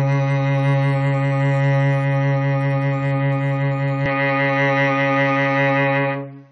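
At 4.06 s the music turns suddenly duller and stays that way to the end. Nothing above 6.4 kHz remains. Faint new background noise appears, far below the music. The level barely changes, with no gap. This is likely an input switched to a poorer device.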